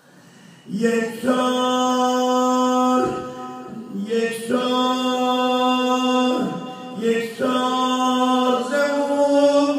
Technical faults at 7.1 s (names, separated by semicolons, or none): none